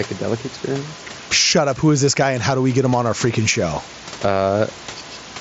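Gain pumping runs through the whole speech clip. The level swings by around 10 dB. Room noise sits about 29 dB below the speech. This likely comes from input gain set far too high, with a fast limiter clamping down. The band stops near 7.7 kHz, which fits an mSBC headset link.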